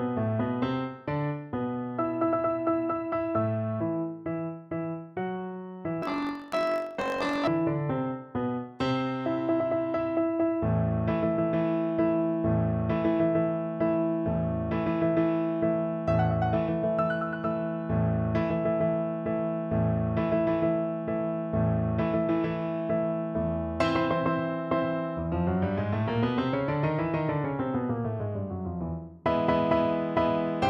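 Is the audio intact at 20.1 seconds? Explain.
Yes, the audio at 20.1 seconds is intact, with no dropout, glitch or other fault at that moment.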